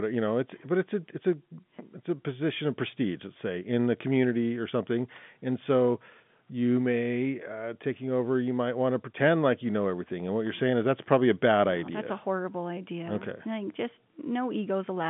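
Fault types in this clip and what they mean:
No faults in this clip.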